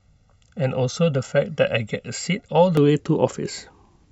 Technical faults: channel delay (comb filtering)

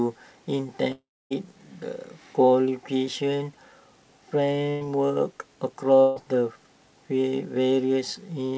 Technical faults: long network dropout; burst of packet loss

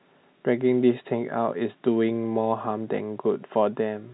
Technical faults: none

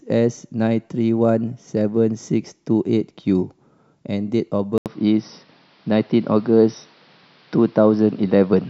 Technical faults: input switched to a poorer device

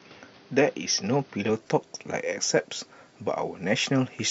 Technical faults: input switched to a poorer device

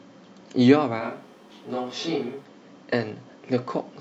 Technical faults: switch to a distant microphone

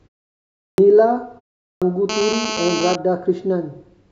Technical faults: clipped start after a pause; GSM phone buzz

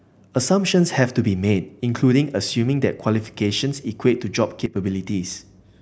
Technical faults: sudden gain jump

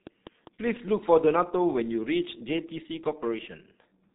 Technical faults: G.723.1 codec; train of clicks

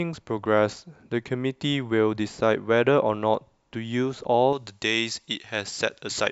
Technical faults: pre-emphasis left on

